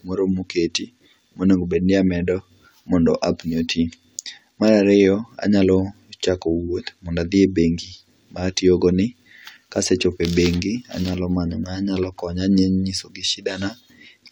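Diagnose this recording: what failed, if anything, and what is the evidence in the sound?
Nothing in the speech stood out on listening as a sign that any stage in the recording or playback chain had failed.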